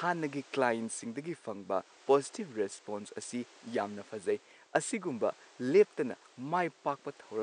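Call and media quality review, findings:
Nothing to flag on this speech clip; the only thing in the background is the room's own noise, sitting about 28 dB below the speech as part of the recording.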